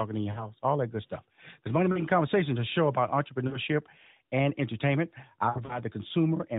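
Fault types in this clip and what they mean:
Lost AMR speech frames: corrupted 20 ms frames make the decoder repeat the last good pitch and vocal-tract settings at falling gain. Here short runs of 40 to 60 ms, such as after "in your", warble and smear rather than falling to true silence like a dropout.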